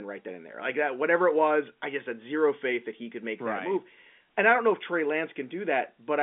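The speech arrives over a G.711 A-law telephone line at 64 kbps, its band confined to about 200 Hz to 3.5 kHz with nothing above 4 kHz, and no technical fault can be heard anywhere in it.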